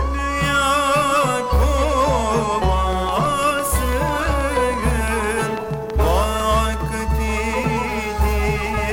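From 2.93 to 6.75 s, a train of clicks ticks over the sound. About twenty evenly spaced pulses arrive roughly six per second, well above the audio, likely from interference.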